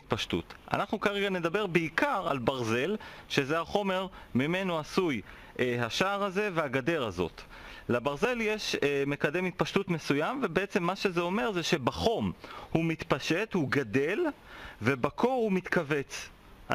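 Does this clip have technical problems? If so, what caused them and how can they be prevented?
Yes, there are two quick skips where the sound jumps forward, at 8.25 s and 15.09 s, with no gap of silence at either spot. The first skips roughly 10 ms and the second about half that. The likely cause is a dropped buffer (overrun): the recording software didn't pull samples off the hardware in time, that chunk got overwritten, and the audio on either side was butted straight together. To prevent it, use a larger capture buffer and keep the recording thread from being starved by other work on the machine.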